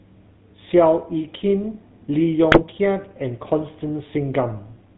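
Throughout, the GSM full-rate codec, which fits a 13 kbps link, rebuilds the speech from a vocal-tract filter and sparse pulses, cutting everything above 4 kHz and leaving a plainly audible buzzy, gravelly roughness. From 2.52 to 2.63 s, GSM bit errors corrupt the decoder's filter, pitch and gain values across what sounds like about five frames, so the speech briefly breaks into squawks and gargling pops.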